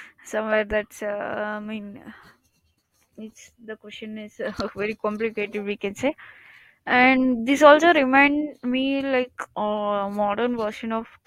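Nothing goes wrong anywhere in this speech recording; there's no technical fault to point to at any moment.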